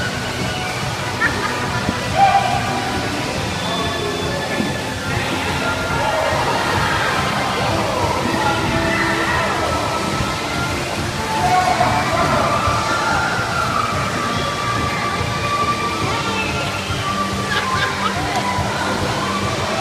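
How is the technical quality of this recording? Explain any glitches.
No glitches can be heard anywhere in the recording; the signal stays steady and intact throughout, with no dropouts, disruptions or other technical faults.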